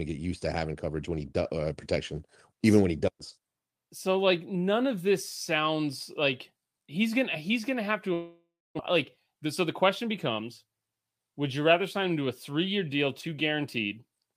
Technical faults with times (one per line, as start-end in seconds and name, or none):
8.13-8.81 long network dropout
9.45-10.43 jitter buffer speed-up